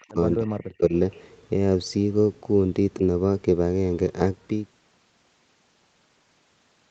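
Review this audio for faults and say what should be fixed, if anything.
Speech suppressed in double talk, from 0.02 to 0.19 s (dipping about 20 dB) and from 0.37 to 0.93 s (dipping as much as about 35 dB), is likely the echo canceller turning the near talker down while the far side spoke. Better double-talk detection would prevent it.

An echo leak at 0.32 to 0.36 s and 0.56 to 0.69 s is a faint copy of the voice about 35 dB below the speech, trailing it by 198 ms. It is likely loudspeaker sound that the far-end canceller failed to remove. Unlike reverberation, it is a single, distinctly delayed copy rather than a smooth tail. Stronger echo cancellation or a headset would prevent it.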